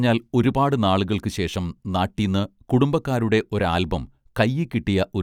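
No technical faults can be heard anywhere in this speech recording.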